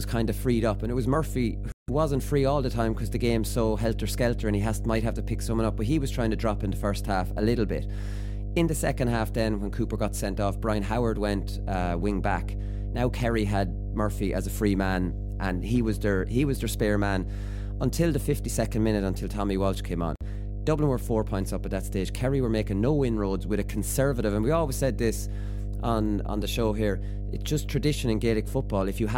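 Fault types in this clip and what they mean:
Mains hum: A steady low tone at 50 Hz runs under the whole speech clip, the signature of power-line current leaking into the signal path through a ground loop or a nearby transformer. It is loud, sitting only a few decibels below the speech itself. On a spectrogram it appears as an unbroken horizontal band at 50 Hz from start to finish. On the waveform it thickens the trace even in pauses, where a regular low-frequency ripple remains.
Bluetooth stall: Playback drops to silence twice and then resumes, most likely because wireless interference delayed packets until the headphone buffer emptied. The first gap runs from 1.72 to 1.90 s, about 161 ms, ending just before "wasn't free all the". The second, at 20.16 to 20.22 s and about 52 ms long, comes right after "came on". Each shows as a flat line on the waveform and a clean vertical gap across every frequency on the spectrogram, with only the hum band interrupted as well.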